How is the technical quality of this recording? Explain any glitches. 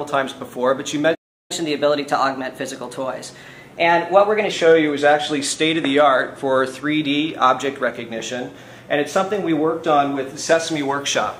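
The recording has two linked glitches near the start, both from playback.

At 1.14 s a playback stall cuts the sound off for about 0.35 s. The player likely ran out of data. Audio resumes at 1.51 s.

From 1.51 s to 4.51 s comes catch-up at higher speed. The player runs 1.1 times fast to recover lost time. Pitch rises about a semitone and a half, then settles.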